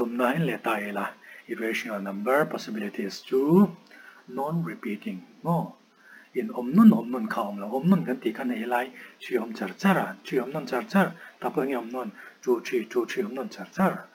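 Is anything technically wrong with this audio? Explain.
Yes. Crude rate conversion runs throughout. Samples were repeated without filtering, which fits a 32 kHz to 44.1 kHz change. This adds an inharmonic, gritty fizz, roughly 30 dB down, tracking loud and high sounds.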